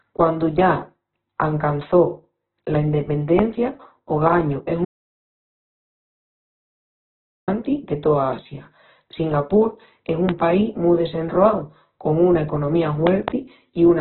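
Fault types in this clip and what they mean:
Opus compression: The speech sounds rough and grainy throughout, with nothing above 4.1 kHz. That narrow band and heavy damage point to a very low bitrate, around 8 kbps. The likely cause is Opus in its music mode running short of bits.
Loud pop: Sharp pops sit on top of the speech, which carries on beneath. One comes at 3.39 s, about 20 dB above the signal. One comes at 10.29 s, before "país mu desenroau con". Two follow "desenroau con una economía" at 13.07 to 13.3 s. A likely voltage spike causes them.
Audio dropout to silence: From 4.85 to 7.48 s, about 2.63 s, the sound cuts to complete silence with no room tone. It returns mid-flow with "de toa". The likely cause is lost input while recording continued writing zeros.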